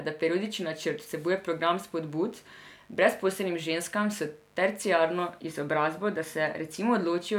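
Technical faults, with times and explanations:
0.95–7.29 s, mains buzz: faint, raspy 50 Hz buzz from switching spikes; spectrogram shows stacked horizontal lines every 50 Hz reaching several kHz.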